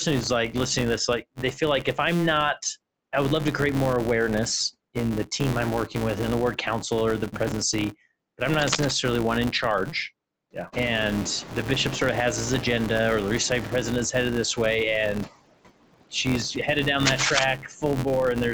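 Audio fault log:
Throughout: noise suppressor artifacts. Steady background noise is pulled down by about 21 dB between phrases and rises again under speech. The waveform's noise floor pumps with speech level.
Throughout: filter restarted on every block. A filter that resets its state at each block boundary puts a small transient at the start of every block, heard as a 172 Hz buzz that tracks loudness. That rate fits a 256-sample block. On a spectrogram it appears as evenly spaced thin vertical lines, and in the waveform as regular tiny spikes.
8.60–8.92 s and 17.05–17.44 s: cable scratch noise. Dense, uneven crackling bursts sit over the sound, most likely from a worn cable or connector being moved. The first burst sits a little below the speech and ends just before "one in charge". The second follows "she's headed down" at about speech level. Both show as ragged broadband smears and jagged waveform spikes.
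10.72–13.88 s: noise suppressor catching up. When the room noise jumps by about 22 dB near 10.5 s, the suppressor's estimate lags. At first it removes only about 7 dB, then it sinks the noise over roughly 3.2 s, ending before "is headed this way". The spectrogram shows a bright noise band fading gradually.
17.58–17.83 s: speech cut by the noise suppressor. About a fifth of a second of speech is mistaken for noise and turned down by up to about 13 dB, so it sounds swallowed. The waveform shows a sudden dip in envelope, and the spectrogram shows weakened, hollowed harmonics.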